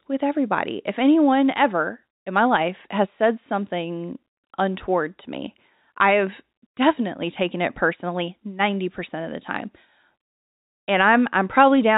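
No technical faults can be heard.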